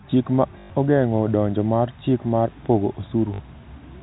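Speech with packet loss and the last packet repeated at 0.6–0.7 s, just before "ogeng’o donjo mar chik", and 3.34–3.4 s, after "mar chik mar pogo". Copies of 20 ms packets stutter and buzz at 50 Hz, showing as repeated identical blocks. The telephone-band G.711 coding is audible as a ceiling at 4 kHz.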